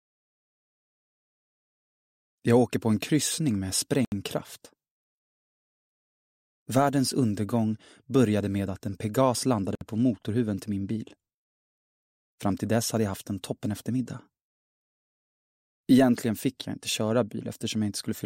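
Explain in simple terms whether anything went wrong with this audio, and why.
Two short holes break the sound, at 4.05 s and 9.75 s. Each is a block of digital silence, lasting about 71 ms and 60 ms. Samples there were replaced by zeros, probably because the program filled its output buffer too late. The sound cuts out and back abruptly.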